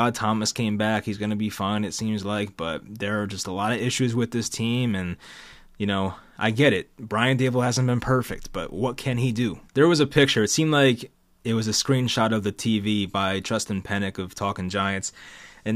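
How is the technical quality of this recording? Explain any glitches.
No audible technical faults.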